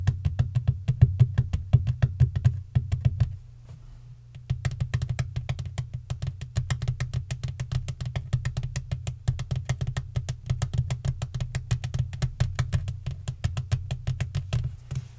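Nothing stood out on listening to this recording of sounds carried over a G.722 call link, with its content stopping around 8 kHz as that codec gives.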